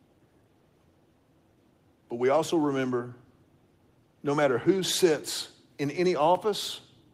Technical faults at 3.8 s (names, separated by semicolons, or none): none